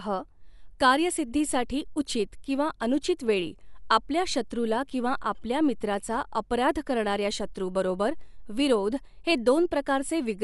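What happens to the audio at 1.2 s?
At 1.2 s the speech carries artefacts that run through the whole clip, likely from Dolby Digital compression at a low bitrate, perhaps 64 kbps. Nothing remains above 11.4 kHz, and bands left without mantissa bits are filled with noise, giving a dull, rough, fluttering sound.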